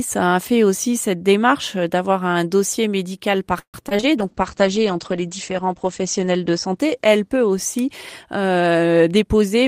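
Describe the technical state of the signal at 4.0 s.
At 4.0 s the signal sits inside a stretch of repeated packet loss (robotic sound) running from about 3.59 to 4.04 s, just after "d'avoir un dossier médical". Over that span packets went missing four times. Each hole was bridged by extending the preceding sound, about 203 ms in all with the longest single gap 145 ms, while about 60 ms simply dropped out. With about 45% of the span synthesised, the sound turns choppy, with pieces missing.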